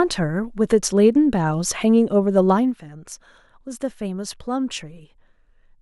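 From 2.49 to 2.84 s, a gain reduction of roughly 10 dB is applied in discrete jumps instead of a continuous ramp. That is zipper noise. The level is updated around a hundred times a second with no smoothing between updates, so each jump puts a tiny discontinuity into the speech waveform. Over those 0.35 s the steps fuse into a fine ticking, zipping texture that rides on the speech as it drops in level.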